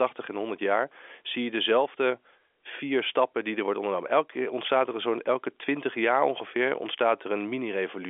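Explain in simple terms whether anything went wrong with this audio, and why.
Nothing went wrong that I could hear; the speech has the narrow, slightly boxy sound of an ordinary landline call, with nothing above about 3.5 kHz, which is simply how telephone audio is carried.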